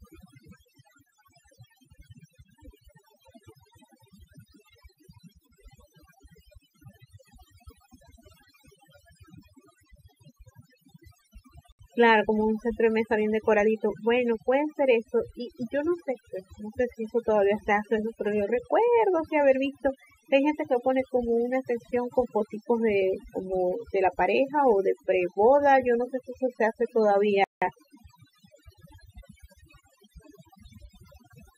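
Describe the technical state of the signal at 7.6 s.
At 7.6 s the speech is affected by overdone noise removal, which runs through the whole clip. A noise reduction stage was pushed too hard. Any frequency band close to its noise estimate gets cut deeply or shut off. Softer parts of the voice fall below that line and vanish with the noise. The gaps sound almost silent but sparkle with tiny twinkling specks.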